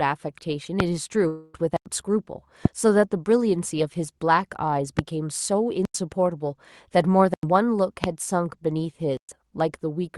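A loud pop hits at 0.80 to 0.82 s, about 20 dB above the speech. It is likely an electrical pulse, such as a switch or static. A long network dropout follows at 1.27 to 1.55 s. The receiver fills the missing 260 ms with a fading buzz or hiss, then speech resumes. A block of digital silence cuts in at 1.77 to 1.86 s, a 93 ms hole that fits a 4096-sample buffer left unfilled. More pops occur at 2.65 to 2.68 s and 4.99 to 5.01 s. Further silent blocks come at 5.85 to 5.95 s and 7.34 to 7.43 s. Another pop lands at 8.04 to 8.06 s. A final 118 ms block of silence falls at 9.17 to 9.29 s.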